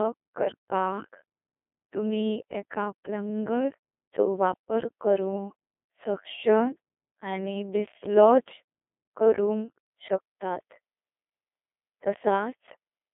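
Speech, degraded throughout by the Codec 2 vocoder. It sounds robotic and buzzy, and the damage is heavy, which fits a 2.4 kbit/s mode. The decoder rebuilds speech from sine waves, not the original waveform. The band runs 300 Hz to 3.5 kHz, with nothing above 3.7 kHz.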